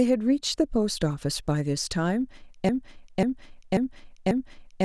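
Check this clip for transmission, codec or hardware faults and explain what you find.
A broken-record loop takes over from 2.69 s to the end: a 0.54 s fragment of the speech repeats four times back to back. Likely a stalled player or stream re-sending its last buffer. The spectrogram shows identical blocks every 0.54 s.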